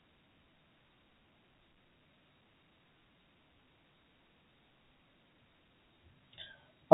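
Nothing here counts as a fault: the speech simply carries the usual fixed-line telephone character of G.711 coding, with nothing above 4 kHz and only the faint quantisation hiss that rides along with the level, just as that format is meant to sound.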